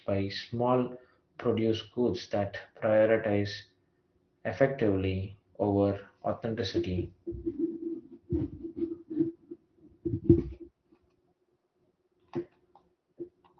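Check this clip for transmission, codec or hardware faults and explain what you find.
No faults turn up in this clip.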